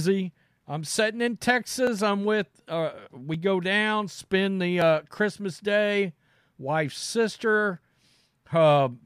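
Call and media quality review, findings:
Clock drift buffer slips: two devices likely on independent clocks, mismatch around 700 ppm. Buffer drifts until roughly 50 samples get dropped or repeated. Regular clicks every 1.47 s, 0.40 to 7.77 s, about seven, audible over speech.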